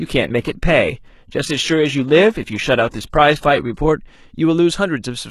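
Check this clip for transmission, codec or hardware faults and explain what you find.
There's one fault here, an adaptive stream starting at a low bitrate. From the start to 3.81 s the speech lacks real treble, with swirly, synthetic highs and stronger codec smearing, which fits something like HE-AAC at 16 kbit/s. Once the player had gauged the connection, it switched up without a gap to a cleaner rendition consistent with AAC-LC near 96 kbit/s.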